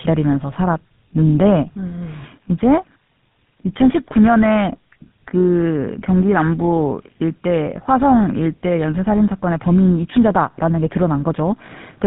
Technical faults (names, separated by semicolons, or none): tandem speech coding